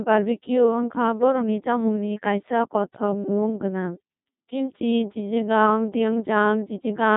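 From start to finish the speech passes through a Codec 2 vocoder, and the damage is heavy. Only pitch, voicing, energy and a coarse spectral shape survive. The decoder rebuilds the voice from sine waves, leaving a robotic, buzzy tone with nothing above 3.8 kHz, which fits a rate of about 2.4 kbit/s. The original waveform is simply gone, replaced by synthetic harmonics.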